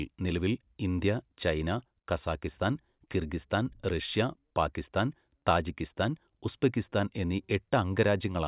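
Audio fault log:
No faults heard.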